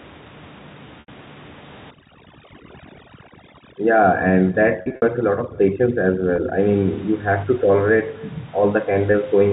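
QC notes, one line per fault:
Throughout: echo with no canceller. The far end's loudspeaker feeds its microphone and nothing cancels it, so every phrase returns roughly a third of a second later, about 24 dB down and thin.
1.00–1.08, 4.82–5.02, 6.36–6.38, 9.12–9.14: packet loss with pitch repetition. Lost packets are bridged by repeating the last pitch period, so the short gaps sound like a briefly held, buzzy tone, while longer ones fade toward silence. The 80 ms gap at 1.00 fits four 20 ms packets, and the 20 ms gaps at 6.36 and 9.12 fit one each. At 4.82–5.02 about 140 ms goes missing in scattered bursts, the longest about 60 ms.
1.91–6.60: overdone noise removal. Noise suppression set too hard mutes frequency bands near its noise estimate, leaving a near-silent background with twinkling specks. The room noise, about 22 dB under the speech, is stripped along with quiet speech detail.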